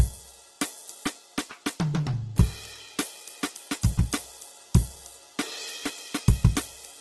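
Throughout the music, tones sound grainy and rough, with noisy fill where detail should be and nothing above about 12.2 kHz. This is likely Opus compression in its CELT mode, at a rate that fits roughly 12 kbps. Unlike MP3, it gives coarse texture, not swirling holes.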